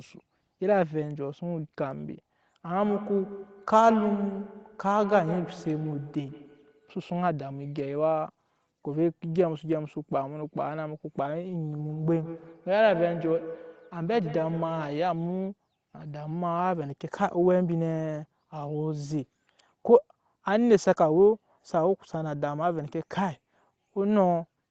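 Feedback echo between two devices appears from 2.79 to 7.38 s and again from 11.77 to 15.14 s. A second device in the same room replays the speech, this microphone picks it up again, and no echo canceller removes that foreign playback. Each syllable comes back roughly every 150 ms, thinner and more ringing with each pass, with the strongest repeats at about 11 dB and 12 dB below the speech.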